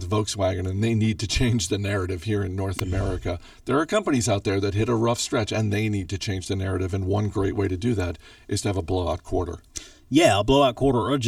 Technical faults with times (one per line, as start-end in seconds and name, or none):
0.00-11.27 channel delay (comb filtering)
2.79 electrical switching spike